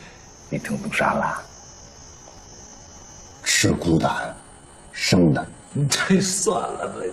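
Software most likely stretched the audio from 1.43 s through to the end to fill a longer slot, running it at about 0.74 times its original speed while holding the pitch steady by repeating short fragments. This is a time-stretched section: from that point the pace slows abruptly while the pitch stays unchanged, and the audio drags all the way to the close.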